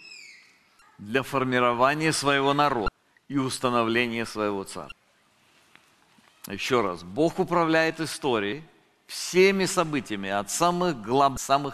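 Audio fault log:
0.79–11.37 s, damaged data in a compressed stream: brief blips at 0.79–0.82, 2.85–2.88, 4.89–4.92, 8.52 and 11.34–11.37 s, as the decoder misreads corrupted frames and hunts for the next header.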